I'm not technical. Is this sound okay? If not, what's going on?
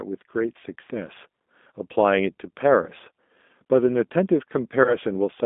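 No. The whole recording sounds thin, muffled and a little rough or robotic, like an old phone call. That is the G.729 codec, a compression method for internet phone calls. Instead of sending the actual sound, it sends a rough description of the speaker's voice and rebuilds an approximation at the other end. It also throws away everything above about 3.6 kHz, so the crisp, bright part of the speech is missing.

There are also two brief glitches, at about 2.82 to 2.88 seconds and 4.84 to 4.97 seconds. Each sounds like a short buzzy or smeared stretch where the speech briefly stops sounding natural. This is VoIP packet loss concealed by the speech codec. A small piece of the call, around a fiftieth of a second, never arrived. The receiving end covered the gap by stretching out the last sound it had and fading it down. It then took a moment to sound right again.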